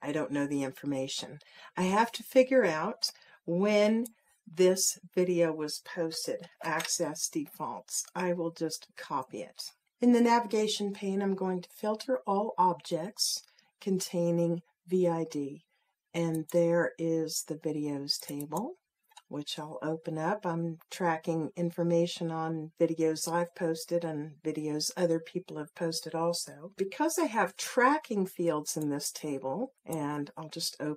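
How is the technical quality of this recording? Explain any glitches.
No glitches or technical faults can be heard anywhere.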